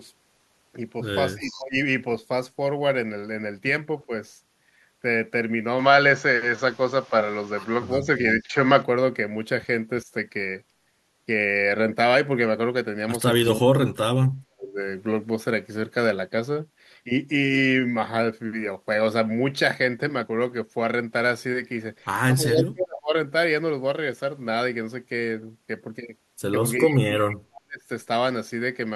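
From 1.35 to 1.76 s the speech dips, with the drop deepest around 20 dB, which is likely speech suppressed in double talk. The echo canceller likely attenuated both talkers while both sides spoke. The same dips recur at 4.06–4.12, 7.95–8.54, 10.05–10.09, 13.44–14.8, 22.43–23.15 and 26.85–27.87 s, cutting out nearly completely, by about 40 dB, at 13.44 and 26.85 s.

Overlapping the first dip, 1.41–1.63 s, a faint copy of the voice arrives 342 ms late, about 20 dB down. This is an echo leak, likely loudspeaker echo that the loudspeaker side's canceller did not fully remove.

From 5.79 to 8.83 s the sound turns duller, with a small level shift, and a new noise floor roughly 30 dB below the voice. This points to an input switched to a poorer device, likely a narrower-band microphone.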